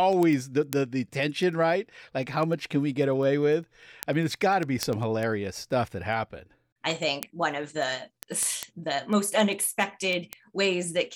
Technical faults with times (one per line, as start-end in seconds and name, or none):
0.13-11.13 word clock ticks